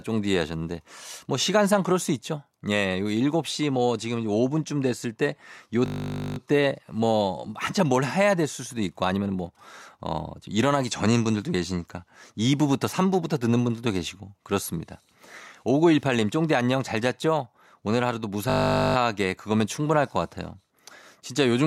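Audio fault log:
5.86–6.38 s and 18.5–18.96 s, system hang loop: a 20 ms slice of speech repeats about two dozen times as the hardware cycles a stalled buffer, giving a steady 50 Hz buzz.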